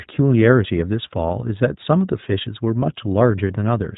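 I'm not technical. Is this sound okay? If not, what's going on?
No. The whole clip has gone through the iLBC codec, a narrowband internet phone codec. It throws away everything above 4 kHz, so the speech sounds thin and muffled, like an old phone line. The damage is plainly audible. Voices come out clear enough to follow but a little rough and synthetic. That is simply what this codec does to sound when it squeezes it small.

There are also lost iLBC frames, from 3.48 to 3.51 s, near the very end. About 20 ms of sound went missing in transit, which fits one lost frame. The decoder papered over the hole by repeating the last bit of voice with some noise mixed in. So you hear a brief held, slightly buzzy blip. It is very short, and the voice recovers straight away.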